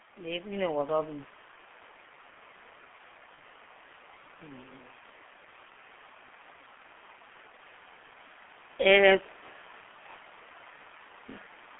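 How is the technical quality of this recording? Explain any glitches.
Pretty rough, honestly: the whole recording has gone through a heavy low-bitrate telephony codec, and there are two short glitches on top.

G.723.1 codec, throughout: The band runs only from about 200 Hz to 3.5 kHz, so there's no air or sparkle. The damage sounds like a roughly 6 kbit/s G.723.1 stream. That codec rebuilds the voice from a coarse model refreshed every 30 ms, so the speech comes out muffled and hoarse, and the consonants smear together instead of landing crisply.

Automatic gain rising, 0.05 to 1.28 s: At the very start, the gain control decides the input is too quiet and turns itself up bit by bit. It adds about 3 dB over a little more than a second. Because it's just a level knob, the voice and the background swell together, so the opening has a gentle fade-in quality.

VoIP packet loss concealed by the speech codec, 3.35 to 3.39 s: About 30 ms of audio, one codec frame, went missing here. 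The decoder filled the hole by carrying its last pitch and filter settings forward and lowering the level as it went. You get a brief stretched smear in place of the real sound. It doesn't snap back cleanly either, since the next frames are built on that guess.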